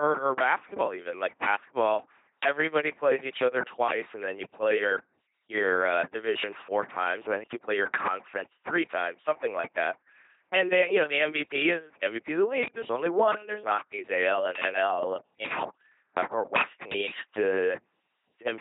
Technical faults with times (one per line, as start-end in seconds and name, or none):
0.00-18.61 LPC-10 vocoder